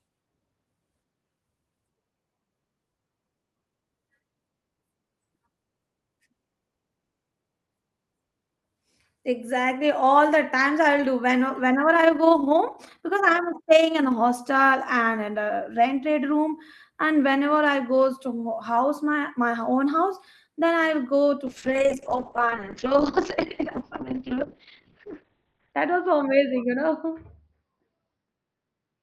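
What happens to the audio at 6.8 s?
Nothing goes wrong at 6.8 s; the speech passes through intact there, carried normally by the call path.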